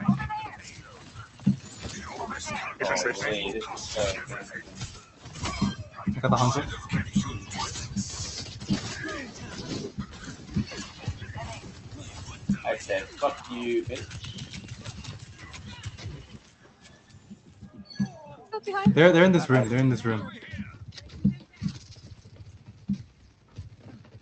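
A noise suppressor tuned for speech was left running on music or sounds throughout, so held tones and tails dip by roughly 10 dB, pumping and thinning while attacks pass; the call path's audio stops around 8 kHz.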